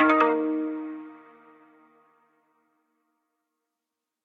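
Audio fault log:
No fault turns up anywhere in the clip.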